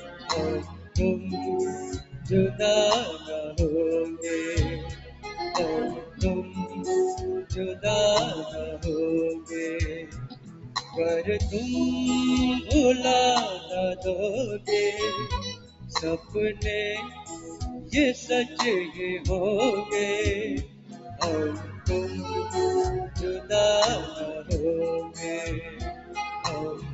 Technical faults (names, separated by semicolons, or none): noise suppressor applied to music or sounds; sound cut by the noise suppressor